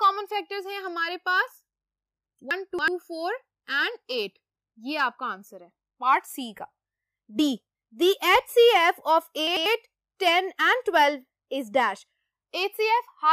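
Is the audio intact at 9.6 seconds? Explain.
No. From 9.47 to 9.66 s the sound turns briefly jumbled. This is chunks out of order: one 93 ms chunk arrived a chunk late and plays after the chunk that should follow it. Nothing is missing, but the sequence breaks at three hard splices.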